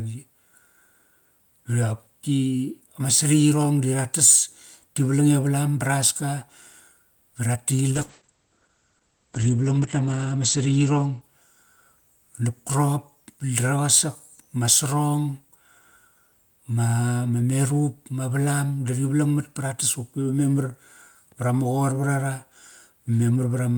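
Speech with a call bitrate drop from 7.93 to 13.97 s: the encoder starves, treble vanishes above 8 kHz, and the voice turns rough and muffled, roughly an 11 kbps rate at worst, for about 1.7 s.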